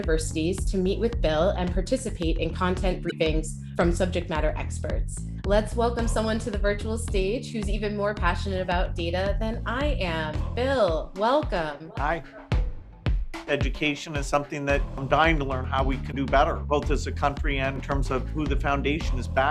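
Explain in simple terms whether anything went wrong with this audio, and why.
Damaged data in a compressed stream, at 3.07–3.13 s and 16.08–16.13 s: corrupted file data makes the player lose its place, causing brief glitches.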